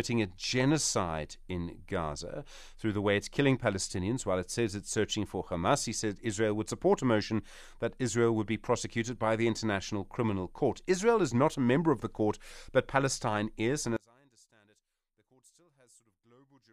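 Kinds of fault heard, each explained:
One channel inverted: from 13.97 s to the end, the speech drops by about 34 dB when heard in mono, leaving only a faint trace. One stereo channel has likely flipped polarity, so the centred voice cancels against itself and just the small left-right difference survives.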